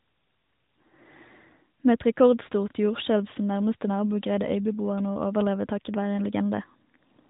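Speech clip; no faults found.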